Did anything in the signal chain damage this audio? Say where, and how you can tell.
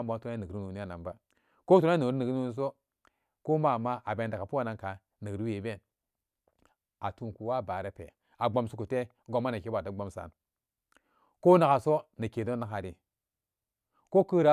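No, nothing in the chain audibly damaged this speech recording at any stage.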